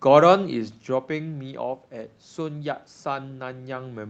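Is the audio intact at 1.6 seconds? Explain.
Yes, the audio is intact at 1.6 seconds, with no fault present at that moment.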